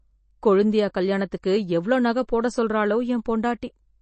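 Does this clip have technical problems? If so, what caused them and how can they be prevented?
Yes, the speech is dull above about 8.3 kHz throughout, with a watery swirl, likely MP3 compression at around 32 kbps. Encoding at a higher bitrate would prevent it.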